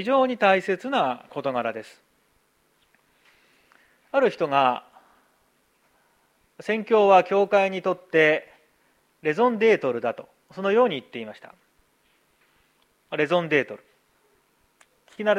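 No technical faults are audible.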